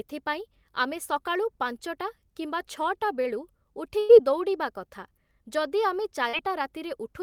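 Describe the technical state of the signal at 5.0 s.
At 5.0 s the speech signal is intact, with no audible fault at that moment.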